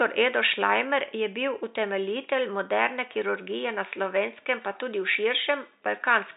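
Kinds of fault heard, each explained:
No kinds of fault are heard in this speech clip, only a faint room noise that sits about 51 dB below the speech.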